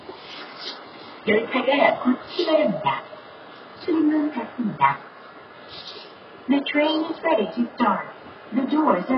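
Throughout, the audio was likely squeezed through HE-AAC compression at a very low bitrate, around 12 kbps, so the replicated treble sounds gritty, metallic and mismatched against the lower bands.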